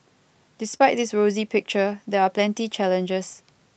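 At 0.73 s there is a lost packet rebuilt from error correction. One packet, about 20 ms of audio, never arrived, but the packet after it carried a low-bitrate copy, and the decoder played that copy instead. Nothing drops out. The speech briefly turns rougher and grainier. On a spectrogram the harmonics in that 20 ms slice look smeared and noisier, with more energy filling the gaps between them. The waveform stays continuous, with no gap.

Right after that, from 0.77 to 0.81 s, comes a short concealed packet loss. About 20 ms of audio was missing when the decoder needed it. The receiver filled around 16 ms by extending the preceding sound and then cross-faded back into the real signal. It comes across as a brief smear or wobble.

Both events sit on top of the Opus call path's ordinary coding noise. The spectrum stops at about 8 kHz, which fits a wideband setting around 32 kbps.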